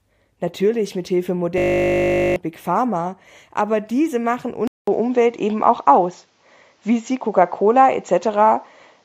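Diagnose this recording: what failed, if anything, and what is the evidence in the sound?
Driver or buffer stage: a system hang loop from 1.58 to 2.36 s. One 20 ms slice repeats at 50 Hz, giving a steady buzz, and roughly 0.7 s of audio is lost.

Input stage: right after "aber diese machen", at 4.67 s, there's a 200 ms gap. Then the band stops at 7.6 kHz, the level shifts about 5 dB, and new hiss appears, likely the input switched to a poorer device.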